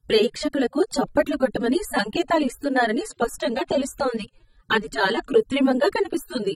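Throughout the speech the sound is dull and smeared. Sibilants and sustained vowels have a fizzy, warbling texture and nothing is heard above 15.8 kHz. This is likely AAC compression at a low bitrate, around 24 kbps, where coarse quantisation leaves spectral holes.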